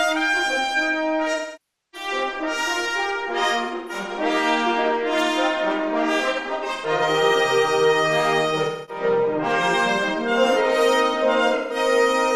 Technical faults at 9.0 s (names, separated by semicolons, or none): AAC frame loss with concealment